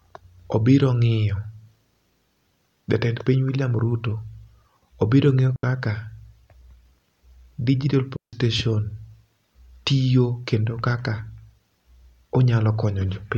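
Clean holes of near silence at 5.56 s (73 ms) and 8.16 s (167 ms), without noise bursts: a digital wireless dropout, where the receiver mutes after losing too much data.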